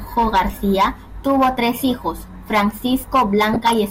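From 3.53 to 3.79 s the speech is overlaid with DAB burbling: weak reception let bit errors slip past error correction into the MP2 data, so corrupted samples put short blips of noise in individual sub-bands, producing brief noisy blips across what sounds like roughly a dozen frames.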